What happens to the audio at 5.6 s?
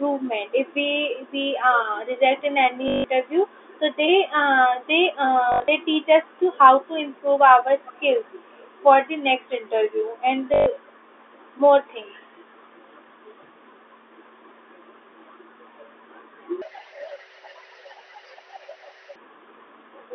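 A brief robotic stutter with a buzz near 50 Hz, from 5.52 to 5.68 s. This is packet loss with the last packet repeated: about 120 ms went missing across that stretch, the longest gap 80 ms, and the receiver looped the previous packet, which fits 20 ms packets.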